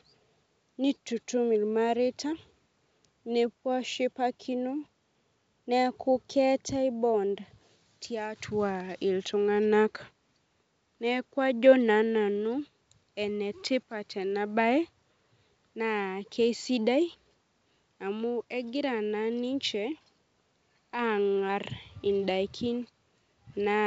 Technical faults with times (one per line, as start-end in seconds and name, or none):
none